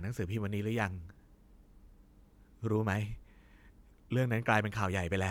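Listening to the speech recording, nothing stood out as a technical fault at any point.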